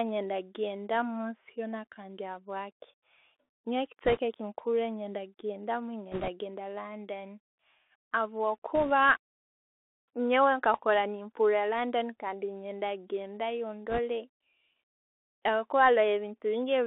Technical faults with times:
0.00-16.87 Bluetooth CVSD headset codec
4.05-4.19 bit errors on a Bluetooth voice link
6.12-6.30 bit errors on a Bluetooth voice link
8.75-8.92 bit errors on a Bluetooth voice link
13.90-13.99 bit errors on a Bluetooth voice link

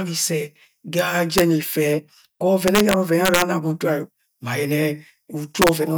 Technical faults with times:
0.99 integer overflow
1.38-1.41 integer overflow
2.68-3.42 integer overflow
5.62-5.69 integer overflow

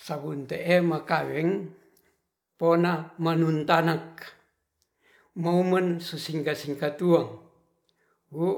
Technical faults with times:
none

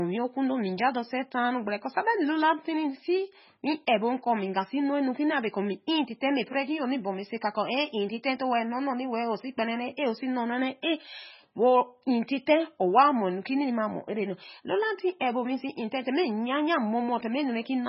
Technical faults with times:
0.00-17.88 MP3 compression

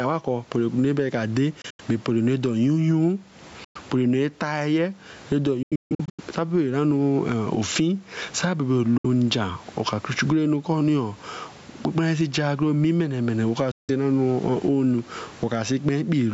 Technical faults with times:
0.00-16.34 gain pumping
1.61-1.81 Bluetooth dropout
3.64-3.76 Bluetooth dropout
5.63-6.20 Bluetooth dropout
8.97-9.05 Bluetooth dropout
13.71-13.90 Bluetooth dropout

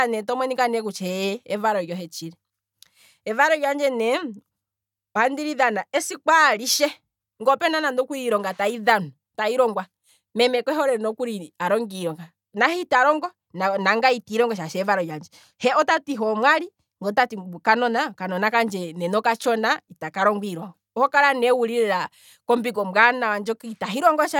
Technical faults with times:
none

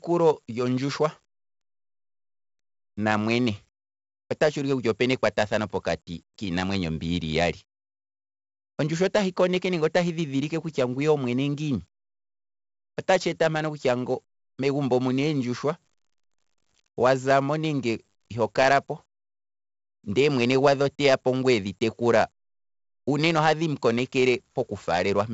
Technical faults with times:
0.00-25.34 4-bit ADPCM compression

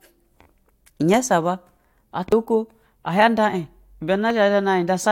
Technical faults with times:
2.32 overlap between stream segments
4.30 overlap between stream segments

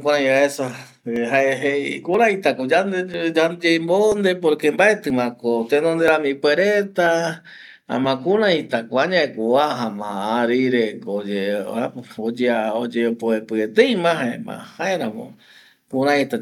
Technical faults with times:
1.16 overlap between stream segments
2.14 overlap between stream segments
3.14 overlap between stream segments
4.12 overlap between stream segments
5.10 overlap between stream segments
6.08 overlap between stream segments
7.06 overlap between stream segments
8.04 overlap between stream segments

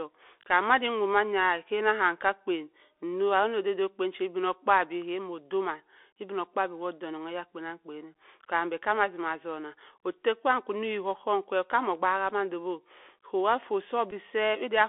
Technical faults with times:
0.00-14.88 Bluetooth CVSD headset codec
14.11 Bluetooth headset packet repeated

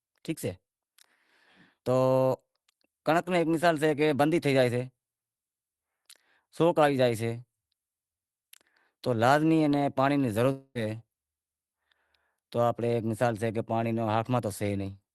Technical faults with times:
10.51-10.78 long network dropout

